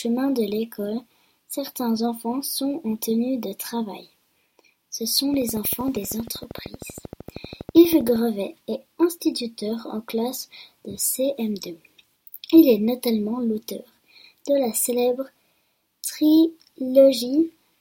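From 5.34 s to 8.17 s a steady ticking runs over the sound, a train of clicks at about 12.8 per second, evenly spaced and alike in shape, some forty pulses in all. Each click stands a few decibels above the surrounding audio, so the pattern is heard over the sound, gaps included. The cause is likely an outside pulse source, such as interference from nearby equipment or a faulty connection or power supply.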